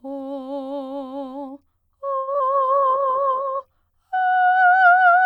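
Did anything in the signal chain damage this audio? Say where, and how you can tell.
Yes. Three kinds of damage are audible, all from the network and codec stages of a call.

A short stall from a late packet sits at 2.19 to 2.29 s. The music holds on one sound for about 80 ms, then carries on from exactly where it stopped. Nothing is skipped. A packet arrived late, the jitter buffer emptied, and the receiver stretched the last sound to cover the wait. Playback then runs about 80 ms later than before.

Short concealed packet loss follows right after, at 2.33 to 2.36 s and again at 2.38 to 2.41 s. Each is a brief smear or wobble. About 20 ms of music is gone each time. The decoder never got those packets. It extended the preceding sound briefly, then blended back into the real signal. The two gaps sit only 20 ms apart, which points to a burst of loss on the network.

A call bitrate drop runs from 2.55 to 3.81 s. 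The music turns rough and dull, then clears. The encoder's rate fell from 128 kbps to 16 kbps and stayed at the floor for about 1.2 s. The bandwidth estimate collapsed right after the packet trouble. At 16 kbps music is coded coarsely and loses its top end, so the texture and brightness return only when the rate recovers.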